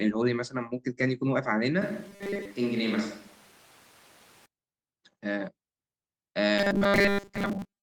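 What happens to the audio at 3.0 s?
At 3.0 s the sound sits inside a switch to a distant microphone running from 1.82 to 4.46 s. The pickup turns roomy and hollow, thins in the bass and drops by about 5 dB, with room noise rising to roughly 25 dB below the speech. The likely cause is that the close microphone's signal dropped out and a farther one took over. Unlike a plain level dip or added reverb, the tone, ambience and noise floor all change abruptly together, and they snap back at the end.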